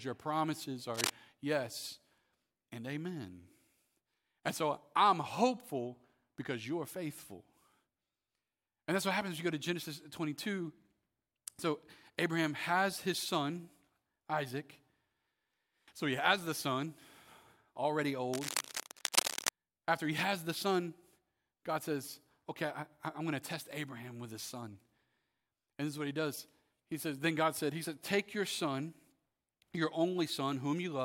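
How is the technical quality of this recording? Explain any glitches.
The speech is marred by cable scratch noise in two places. At 0.94 to 1.10 s, just after "your promises", and again at 18.33 to 19.49 s, dense, ragged scratching sits over the speech, about as loud as it. The likely cause is a worn lead or connector being moved, its contact flickering rapidly.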